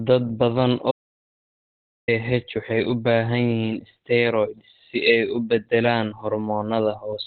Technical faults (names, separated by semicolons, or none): Opus compression; audio dropout to silence